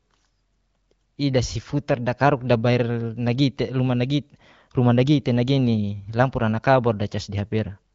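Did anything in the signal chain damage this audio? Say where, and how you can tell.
No, no fault is audible.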